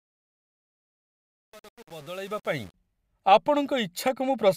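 From the start to 2.74 s, the speech carries a fade with truncation distortion. The gain stage behind it keeps only about 7 bits and adds no dither. At such low resolution, the quiet part of the waveform collapses into a few coarse square steps. The result sounds gritty and grainy. The damage is at its worst across the whole ramp.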